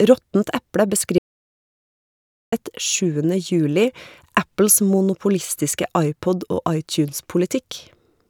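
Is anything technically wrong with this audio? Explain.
Yes. From 1.18 s to 2.52 s the speech drops out to complete silence for about 1.34 s, with no room tone underneath. This is an audio dropout to silence. The input was likely lost, and the recorder kept writing zeros. Whatever was said then is gone.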